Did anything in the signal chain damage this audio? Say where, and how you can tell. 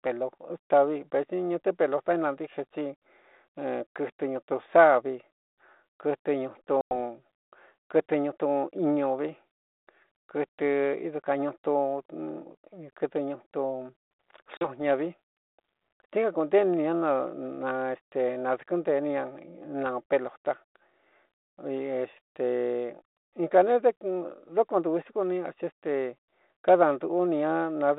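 Yes, at the network stage: packet loss on an ADPCM call. Square-edged silent holes at 6.81–6.92 s and 14.57–14.68 s fit roughly ten and four lost packets. They show as flat waveform gaps and blank spectrogram stripes. The decoder's predictor and step size then mismatch the sender's, so speech resumes slightly distorted.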